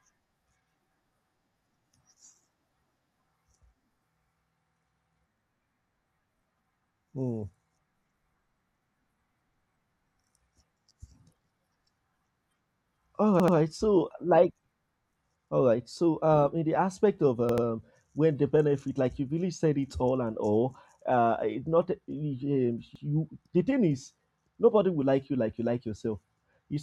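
At 5.38, 13.40, 17.49 and 22.96 s the speech stutters. Each is a repeated buffer. New audio arrived late, so the last 85 ms block played again, which fits a 4096-sample buffer. It repeats once at 5.38 and 22.96 s, twice at 13.40 and 17.49 s. Each join is hard.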